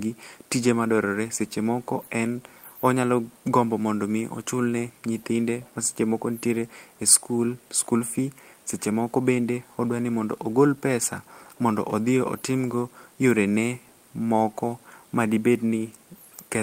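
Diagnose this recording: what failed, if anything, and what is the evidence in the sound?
Nothing in this speech recording points to a failure at any stage; the sound gives no evidence of a problem to diagnose.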